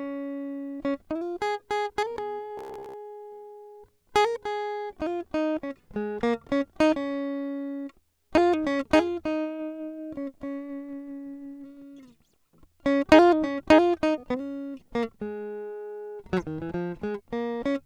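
A music clip that breaks into robotic sound from repeated short buffers between 2.58 and 2.94 s. New audio most likely stopped reaching the playback in time, so the software kept replaying its last short slice instead, about 15 ms long, repeated over most of that stretch while the real music was skipped. That loop imposes a fixed buzz at about 66.7 Hz, giving the passage a rigid, metallic drone that only loosely tracks the underlying music.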